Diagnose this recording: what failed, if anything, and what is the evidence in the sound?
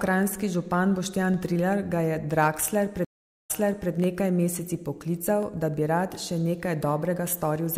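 Three single sharp clicks at 1.34, 4.04 (just before "nekaj meseci") and 5.43 s (just before "da bi rad še") are likely dropped samples in the driver or buffer stage. Each time, the waveform jumps ahead by a fraction of a millisecond, too little to remove audible sound.

A stream reconnect at the network stage runs from 3.05 to 3.91 s. After about 0.45 s of silence, playback resumes roughly 0.42 s earlier than where it broke off, leading into "nekaj meseci". This is consistent with the player reconnecting and the server resending buffered audio.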